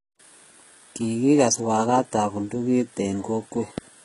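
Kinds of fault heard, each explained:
HE-AAC compression: Heavy damage throughout this speech, likely from HE-AAC at a rate that fits about 12 kbps; the treble is copied up from lower bands, so sibilants sound gritty and lispy, and a spectrogram shows smeared, repeated upper bands ending sharply at 11.1 kHz.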